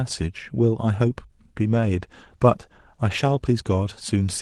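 From 1.57 s to the end, a call bitrate drop sets in. The speech turns coarse and duller, which points to the encoder falling to about 15 kbps.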